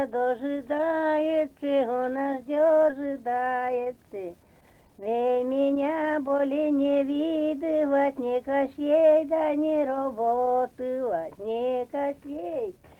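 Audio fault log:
4.70–6.61 s, jitter buffer speed-up: the audio runs about 13% fast while keeping its pitch, sounding hurried, as the receiver drains a backlog by cutting short pitch-period pieces, around 0.3 s in all. Unlike a clock or resampling error, pitch does not rise.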